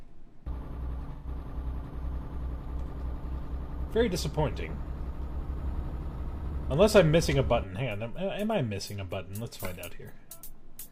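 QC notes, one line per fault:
1.12–1.27 s, AAC frame loss with concealment: a smeared, noisy patch where the decoder rebuilt missing audio from the last good spectrum rather than leaving a silent dropout.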